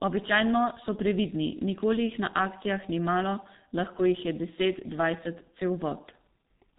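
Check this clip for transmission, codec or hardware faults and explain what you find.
The speech carries a single fault from start to finish: heavy G.723.1 codec damage. The codec works in 30 ms frames and rebuilds the voice from a sparse model that is updated only slowly, so fine detail and rapid transitions are lost. Nothing survives above 3.8 kHz. The result is muffled, hoarse speech with smeared consonants, consistent with a rate near 6.3 kbit/s. A spectrogram shows a hard ceiling at 3.8 kHz and blurred, blocky formant tracks. The waveform looks smoothed, with soft consonant onsets.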